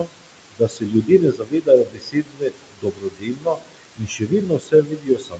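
Noise suppressor artifacts run throughout: the suppressor pulls steady background down by about 21 dB frame by frame, so the noise sinks between the words and rises beneath the speech. Speech cut by the noise suppressor occurs from 0.0 to 0.28 s and again from 0.51 s to the end, where speech mistaken for noise drops by up to about 22 dB, so softer sounds come across swallowed and faint.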